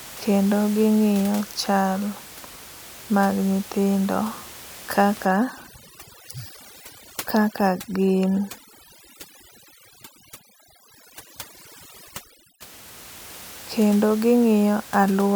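From 5.25 s to 12.61 s the speech passes through overdone noise removal. The noise reducer is set so aggressively that any frequency band near its noise estimate is pulled far down or shut off, and the softer parts of the voice are cut along with the room noise, which sits about 19 dB below the speech elsewhere. Between phrases the background drops to near silence sprinkled with twinkling specks. A spectrogram shows isolated bright dots scattered across a dark floor, with ragged gaps inside the speech harmonics.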